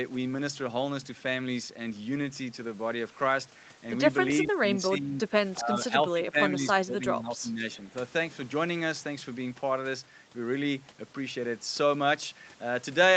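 Between 4.42 and 7.64 s the speech repeatedly sinks and thins: brief dips at 4.42 to 4.58 s, 4.74 to 5.29 s and 5.58 to 5.94 s, then a longer stretch from 6.13 to 7.64 s, pulling the level down by about 10 to 15 dB. This is likely speech suppressed in double talk, where the echo canceller, faced with both ends talking, mistook the near talker for loudspeaker echo and turned it down.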